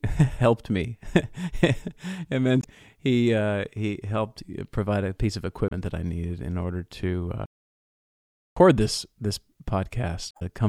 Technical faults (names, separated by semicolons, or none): damaged data in a compressed stream; playback stall